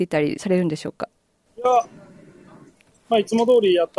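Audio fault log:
0.58–3.99 s, resampler restarted on every block: a steady 50 Hz buzz rides on the sound, present only while there is signal, made of small ticks spaced 20 ms apart. Each 20 ms block was rate-converted on its own, which fits a drop from 48 kHz to 24 kHz. At every block edge the converter lacked the true neighbouring samples and worked from silence or the wrong end of the block instead. This left a small error at each boundary, and the regular repetition fuses into a buzz.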